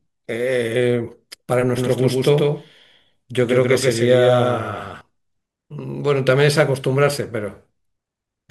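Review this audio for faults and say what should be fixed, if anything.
Doubled audio track, 1.77–5.01 s: a copy about 5 dB quieter trails by about 150 ms, likely from a second capture path, showing as doubled onsets in the waveform. Route the source through only one capture path.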